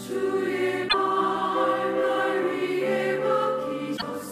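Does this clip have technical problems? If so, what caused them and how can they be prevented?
Yes. Both problems are damaged data in a compressed stream, at 0.85 to 0.95 s and again at 3.93 to 4.03 s. In each spot a run of bytes in the encoded stream was corrupted, so the decoder misread the frames there and lost sync while it hunted for the next valid frame header. Each event lasts about a tenth of a second and is heard as a brief chirp, squawk, click or short hole breaking into the audio. Checksummed transport with error detection, plus verifying file integrity after transfer or storage, would keep corrupted frames from reaching the decoder.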